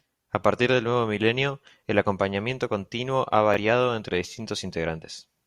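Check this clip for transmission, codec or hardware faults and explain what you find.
One Bluetooth stutter occurs in this speech, from 3.54 to 3.57 s, right after "el acompañamiento continuo ha". A packet arrived late or not at all, so the receiver replayed its last buffered slice to fill the gap, which points to a single dropped chunk of about 21 ms. The repeat sounds like a brief hiccup before the speech jumps ahead. On a waveform, a short segment appears duplicated. On a spectrogram, a thin vertical seam shows where the harmonics restart.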